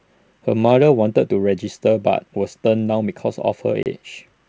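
At 3.83 s the speech drops into a hard-edged silent gap of 30 ms, ending at 3.86 s. This is packet loss on an ADPCM call, with a few packets missing. The G.722 decoder's predictor and step size lose track, so speech returns with brief distortion.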